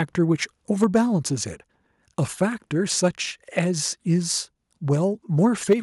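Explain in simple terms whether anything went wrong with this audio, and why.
Microphone overload adds a harsh crackle to the loudest moments at 0.82–0.97 s, 2.41–2.43 s and 5.70–5.73 s, likely because the input was set so high that the tops of peaks were chopped off.

Microphone volume stepped down: at 0.84 s and 5.73 s, everything, including the background, suddenly gets quieter and stays that way. This is likely the call software turning the microphone down right after those distorted peaks. Unlike the crackle, it's a lasting drop in loudness, not a rough edge.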